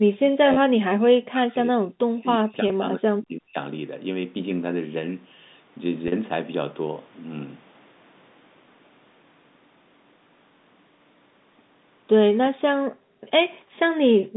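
Speech suppressed in double talk runs from 0.35 to 3.57 s in this speech recording: for roughly three seconds in total the talker dips, thins and breaks up in pieces, sinking by around 40 dB at the deepest point. The likely cause is an echo canceller that heard both sides at once, could not tell the near talker from the loudspeaker echo, and pulled everything down together. Packet loss with pitch repetition occurs at 0.54, 2.68 and 6.08 s. The first two gaps are 20 ms each, which fits a single dropped packet, and they come across as a brief held buzz where the receiver repeated the last pitch cycle to fill the hole. The 40 ms gap at 6.08 s points to two consecutive lost packets, so the repeated cycle lasts longer and is fading out when the speech cross-fades back in. Background gated by the echo canceller appears at 12.86 to 13.31 s, 13.59 to 13.96 s, and from 14.19 s to the end. In each span the room sound drops away by about 40 dB for a few hundred milliseconds because the canceller clamped the microphone while the loudspeaker was playing, and in the first two spans it then releases it. 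All of this sits within the narrow telephone band of G.711 A-law coding, roughly 150 Hz to 3.7 kHz.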